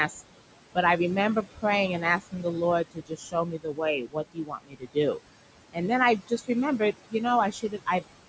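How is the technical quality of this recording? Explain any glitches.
The recording is degraded by an aggressive noise suppressor, which leaves processing artefacts throughout and repeatedly swallows parts of the speech. The content ends at 8 kHz, as expected from call microphone processing, and the room noise sits about 11 dB under the speech.

Noise suppressor artifacts run through the whole clip. The suppressor pulls bands it judges to be steady noise down by about 21 dB frame by frame, so the background collapses between phrases and swells under them. On a spectrogram this appears as patchy, flickering speckles in the noise floor.

Speech cut by the noise suppressor occurs at 1.43–1.64 s (just after "I remember"), 2.21–2.45 s, 2.91–3.80 s, 4.02–4.97 s, 6.20–6.50 s (after "then I"), 6.79–7.14 s and 7.52–8.03 s. The suppressor mistook quieter speech for noise and dropped it by about 16 to 22 dB. 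In the two longest stretches, most of the span is affected. In the others, less is hit, about 100 to 200 ms each. The affected speech sounds swallowed or faint, and the waveform shows sudden dips with dark, hollowed-out gaps in the spectrogram.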